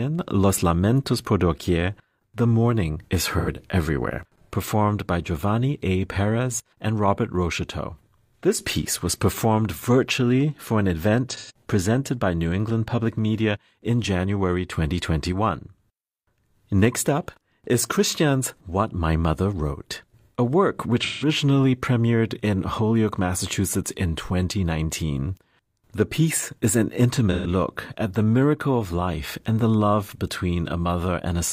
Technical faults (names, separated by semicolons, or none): AAC frame loss with concealment